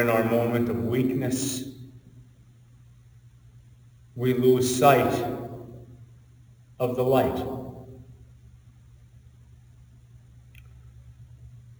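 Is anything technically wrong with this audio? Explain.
Yes, there's imaging from sample-and-hold upsampling running through the whole clip. It sounds like the rate was raised by just holding each sample with no smoothing filter, which fits a 16 kHz source pushed up to 44.1 kHz. That leaves mirrored copies of the spectrum, the first one sitting between 8 and 16 kHz at about 21 dB below the signal. You hear it as a bright, metallic fizz that rises and falls with the sound.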